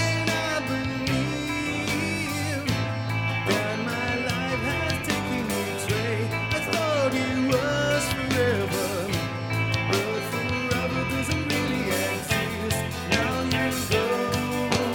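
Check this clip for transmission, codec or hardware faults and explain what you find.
One hardware fault is present: sample clock jitter. It starts at 0.94 s and runs to the end of the clip. The converter's clock wanders, so each sample is taken a little early or late at random. The timing error is around 1.5 microseconds. Where the waveform changes fastest, that small error becomes a larger amplitude error. The result is a rough, hissy layer tied to the sound itself, around 35 dB below the signal. It is strongest on loud, bright passages and disappears in silence.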